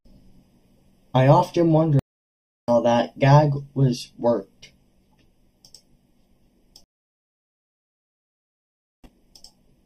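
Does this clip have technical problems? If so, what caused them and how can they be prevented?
Yes. A channel delay (comb filtering) runs through the whole clip. One channel lags the other by a fraction of a millisecond, so summing to mono cancels evenly spaced frequencies, the first near 1.5 kHz. Unlike codec dullness, the hollow, phasey notches stay fixed regardless of the speech. Align the channels, or check polarity and latency, before any mono fold-down.

Stream reconnects occur at 1.99 to 2.70 s and 6.84 to 9.44 s. After "I've often" there is about 0.69 s of silence, and the audio resumes roughly 0.7 s further on at "that gag was worked". The second gap lasts 2.2 s and resumes 0.4 s earlier, repeating audio. A simple dropout would resume where it stopped, but each break here restarts a fresh decoder elsewhere in the stream. Use a larger client buffer and a more stable connection to avoid dropped sessions.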